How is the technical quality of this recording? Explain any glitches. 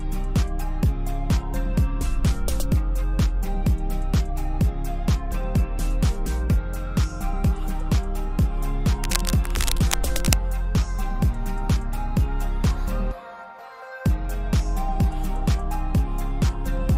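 There's one glitch worth flagging. From about 9.04 to 10.41 s you get a patch of cable scratch noise: dense, uneven bursts of scratchy, rustling noise riding over the sound, sitting roughly 10 dB below it. It's likely a worn cable, connector or control carrying a DC voltage being moved, so the contact resistance jumps around rapidly and dumps those ragged noise bursts into the signal for as long as the movement lasts.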